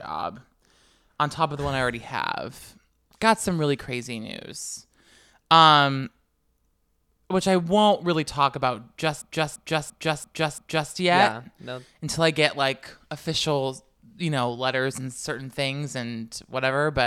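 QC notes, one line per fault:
9.22–10.92 s, system hang loop: right after "won't really talk about", a 341 ms chunk repeats exactly five times, a machine-gun stutter at about 2.9 Hz. The system froze while the hardware kept replaying its ring buffer, which fits a 16384-sample buffer.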